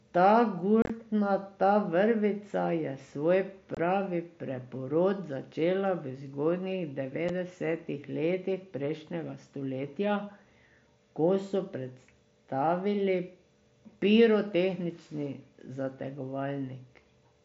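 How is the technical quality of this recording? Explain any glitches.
The recording has three brief dropouts from unconcealed Bluetooth headset packet loss, heard through a wideband mSBC headset link that adds a light grain. At 0.82 to 0.90 s, 3.75 to 3.77 s and 7.29 s, packets between headset and phone were lost and silence or an idle pattern took their place, so the speech has abrupt holes. The first is a chopped stretch with about 60 ms missing across 75 ms, the longest gap 30 ms. The second has 22.5 ms missing, and the third is a 7.5 ms gap.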